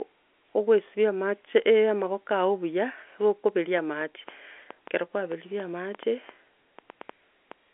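From 3.49 s to 7.53 s, a train of clicks runs over the speech. There are about fifteen of them, arriving at roughly 3.7 per second. The spacing is uneven, so they tick and pop rather than beat. Each click has much the same sharp shape. They sit in the pauses as well, and peak a few decibels above the speech itself. Interference from nearby equipment is the likely cause. It rides on top of narrow telephone-band audio that stops near 3.7 kHz.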